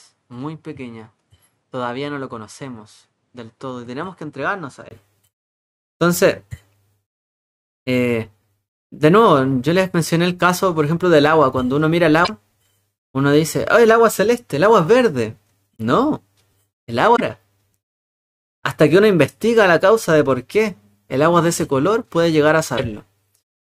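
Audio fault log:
0.0–4.91 s, input switched to a poorer device: the opening sound is duller and about 10 dB quieter, with nothing above 11.4 kHz and a faint new noise floor. At 4.91 s a 20 ms gap precedes fuller sound, likely a change of microphone rather than filtering or gain drift.
12.21–12.30 s, 17.13–17.21 s, 22.74–22.80 s, damaged data in a compressed stream: each is a brief glitch lasting under a tenth of a second, where corrupted frames are misdecoded until the decoder resyncs on a later header.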